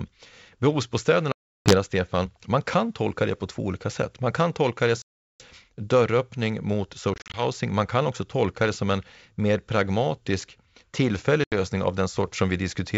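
Speech carried over what sounds like a G.722 wideband call, with faint upper-band hiss that points to the full-rate mode, broken by packet loss on an ADPCM call at 1.32–1.76 s, 5.02–5.42 s after "kan tolka det", 7.14–7.43 s, and 11.44–11.53 s after "en mer pragmatisk tillfällig". The first two lose about 340 and 380 ms, the third is 120 ms of short dropouts spread over 200 ms, and the last lasts 80 ms. On a waveform each shows as a flat, hard-edged hole, and on a spectrogram as a blank vertical band across all frequencies. After each hole the sound resumes slightly distorted for a moment, because the receiver's adaptive predictor and step size have drifted from the sender's and need some tens of milliseconds to resync.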